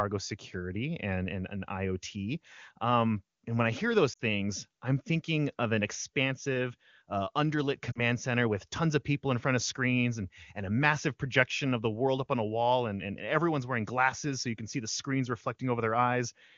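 Speech with lost AMR speech frames at 4.13 to 4.22 s, after "when I hear those", and 7.92 to 8.00 s, before "center with tons of". The decoder stretches and fades the last good sound rather than cutting to clean silence, which sets it apart from a plain dropout.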